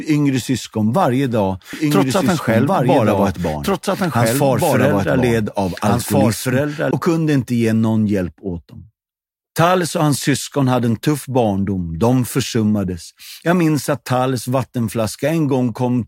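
Speech with a doubled audio track from 1.73 to 6.91 s: an equally loud, dry copy trails about 1.5 seconds behind, likely from a second, slower capture path.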